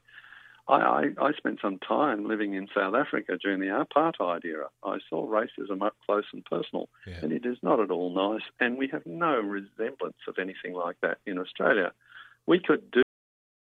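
At 13.03 s the sound halts mid-event in a cut-off end: the final stretch of audio was never written out, so instead of decaying naturally it snaps straight to digital silence, which holds for the remaining 0.75 s of the clip.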